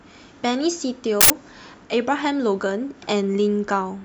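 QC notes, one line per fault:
1.21–1.30 s, uninitialised buffer: a burst of loud digital noise lasting about 93 ms cuts across the speech, with no fade in or out. A playback block was sent to the output before any audio had been written into it, so whatever data remained in that memory was read and played as sample values. Its length fits a 4096-sample buffer. The onset and stop are abrupt because the garbage fills exactly one block.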